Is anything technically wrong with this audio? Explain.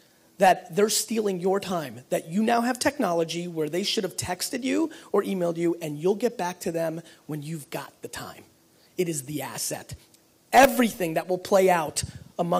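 No, nothing technically wrong stood out on listening to this audio.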